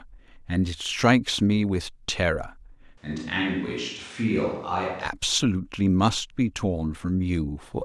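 From 2.98 to 5.05 s the speech suddenly turns roomy and hollow, thinner in the bass and a few decibels quieter, with faint room noise beneath. This is likely a switch to a distant microphone. A spectrogram shows weaker lows and smeared tails, and the waveform steps down and back abruptly.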